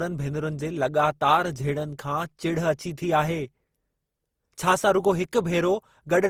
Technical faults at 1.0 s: generation loss

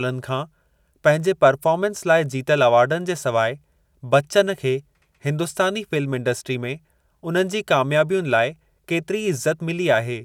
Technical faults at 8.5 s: none

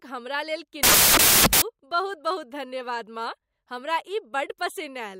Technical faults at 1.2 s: samples built from the wrong bytes

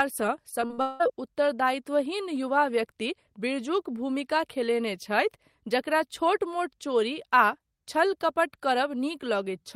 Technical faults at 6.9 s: none

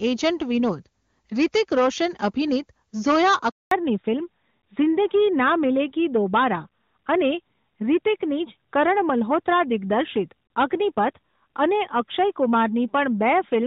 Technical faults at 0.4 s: hard clipping

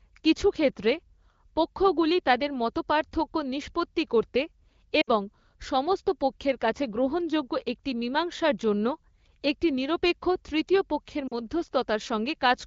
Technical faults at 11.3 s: lost AMR speech frames

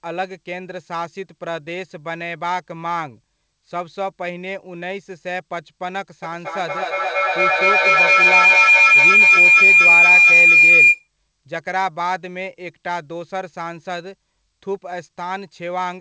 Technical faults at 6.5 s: feedback howl

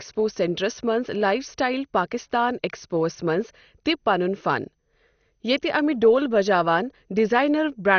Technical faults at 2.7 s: MP2 compression

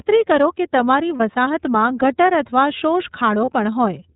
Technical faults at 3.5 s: iLBC codec; lost iLBC frames

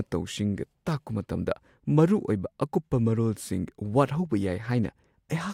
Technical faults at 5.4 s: none

